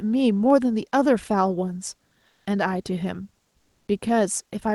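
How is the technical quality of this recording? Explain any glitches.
Two short gaps show comfort noise in place of the background, from 2.27 to 2.45 s and from 3.57 to 3.87 s. The real background, sitting about 44 to 47 dB below the loudest sound, gives way to a steady, featureless hiss about 2 dB quieter. The likely cause is Opus discontinuous transmission: the sender pauses during non-speech and the receiver synthesises matching noise. Unlike a dropout or noise gate, the pauses never fall to silence, and they lose the background's texture.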